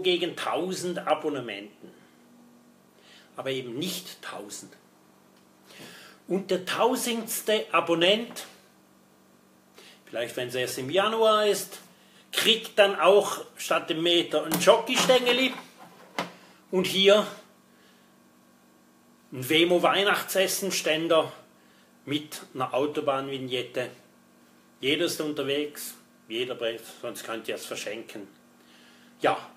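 No dropouts, glitches, level jumps or timing errors are audible anywhere in the recording.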